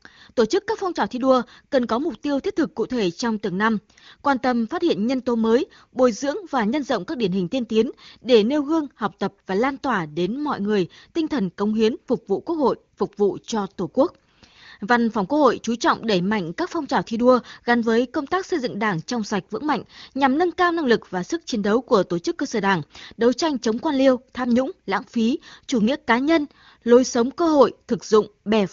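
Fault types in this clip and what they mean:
No faults can be heard in this speech clip. It has passed through the AMR wideband (HD Voice) codec at 23.85 kbit/s, and at that rate the coding leaves at most a faint trace on the sound.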